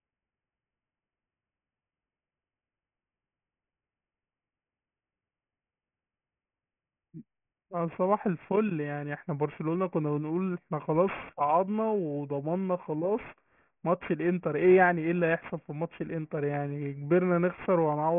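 Speech with aliasing running through the whole clip. The sibilants sound gritty and metallic, because the audio fits a resampling down to about 6 kHz with no low-pass filter in front. Everything above 3 kHz has folded back below that line as unrelated tones, sitting very roughly 20 dB under the voice. On a spectrogram the energy runs solidly up to a hard ceiling at 3 kHz, with mirrored streaks moving opposite to the true harmonics.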